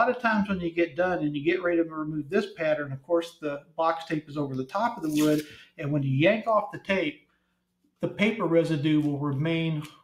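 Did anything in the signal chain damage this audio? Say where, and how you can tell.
Yes. Throughout the clip the level breathes and pumps: sharp onsets mostly get through, but anything sustained sags and swells by around 10 dB, so the sound thins and flutters instead of holding steady. The damage comes from call processing. A noise suppressor built for speech was left on a signal that isn't speech. It treats steady tones, ambience and decaying tails as background noise and keeps pulling them down.

There are distinct dips where the suppressor cut the sound harder than usual, at 1.84–2.61 s, 2.82–3.11 s, 3.29–3.79 s, 4.21–4.38 s, 5.43–5.85 s, 6.72–6.89 s and 7.12–8.02 s. In each one the held or fading portion sinks by about 11 to 17 dB, and decays are cut short. These are cases of sound cut by the noise suppressor: it judged these stretches to be noise and attenuated them well below the surrounding material.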